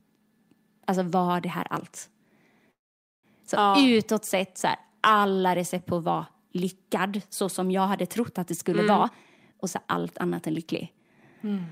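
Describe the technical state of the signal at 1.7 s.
At 1.7 s the speech signal is intact, with no audible fault at that moment.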